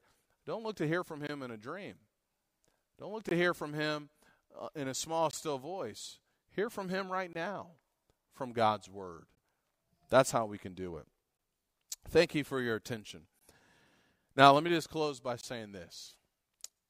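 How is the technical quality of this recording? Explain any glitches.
The speech is repeatedly interrupted by a gap between chunks. The audio was delivered in 2-second chunks, leaving a 20 ms silent hole at every join. None of the speech is lost, but it is cut off cleanly and then resumes. The holes fall at 1.27, 3.29 (just before "hear from"), 5.31, 7.33 (just before "now from"), 9.35, 11.37, 13.39 and 15.41 s (just after "me just close by"). They sound like brief dropouts recurring at a steady rhythm of about two seconds.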